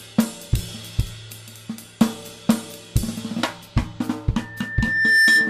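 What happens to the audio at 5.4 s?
At 5.4 s the audio is caught in a loudspeaker feedback squeal. It begins at 4.39 s and runs to the end of the clip at 5.50 s. A microphone is picking up the loudspeaker it feeds, and around 1.8 kHz the loop gain has passed unity, so that tone reinforces itself on every pass. It swells over roughly the first 0.7 s into a steady howl, ending up about 10 dB above the rest of the signal.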